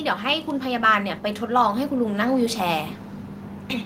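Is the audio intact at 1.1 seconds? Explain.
No. At 1.1 seconds the speech is partway through an automatic gain rise running from 0.23 to 2.9 s. The gain control judged the input too quiet and raised its gain gradually by about 6 dB, so the speech and background noise swell together.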